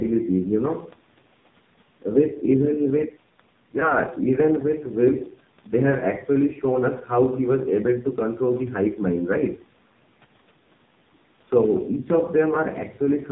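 From the start, the whole clip carries the sound of the AMR narrowband mobile codec. Nothing above 4 kHz survives, so the speech is muffled and lacks crisp consonants. The codec rebuilds each voice from a simple vocal tract model fed by sparse pulses. The damage here is heavy. The voice sounds buzzy and synthetic, which fits a very low bitrate near 5.9 kbps. The missing bass from the call's microphone high-pass is normal.

From 3.80 to 3.92 s there is a lost AMR speech frame. A radio error corrupted the data, and the decoder had to cover the gap. It repeated the last good pitch and vocal tract settings at reduced gain. The gap itself is about 20 ms, which points to a single frame. It is heard as a brief dip or warble. The voice then returns weak or rough for a moment before settling.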